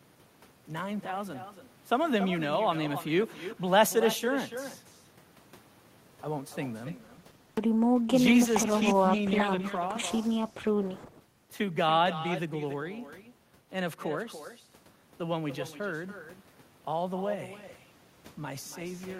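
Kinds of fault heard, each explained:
Echo with no canceller: Throughout the clip, every phrase is trailed by a quieter, thinner copy of itself, about 11 dB below the direct speech and arriving roughly a third of a second later. That is the far end's loudspeaker feeding back into its microphone with nothing removing it. Unlike room reverberation, which smears into a smooth decaying tail, this is a distinct delayed repeat that you can pick out as a separate shadow.
Call bitrate drop: From 6.88 s to 12.85 s the speech turns rough and watery and loses its top end. It sits at its worst for about 3.9 s, then clears as the bitrate recovers. The change fits the encoder being pushed from around 48 kbps down to 16 kbps, coding more coarsely and trimming high frequencies. Packet loss leaves gaps, clicks or robotic repeats. Here the degradation is continuous and unbroken.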